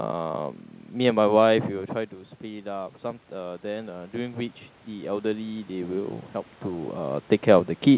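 From 2.42 s to 6.03 s the speech and the room noise beneath it swell together as automatic gain rising sets in. The input level had dropped by about 11 dB after the talker moved back from the microphone around 1.5 s, and the gain control responded by slowly adding about 7 dB over more than three seconds. Because the boost applies to everything at once, the background rises in step with the voice, and the partial correction still leaves the speech below its earlier level.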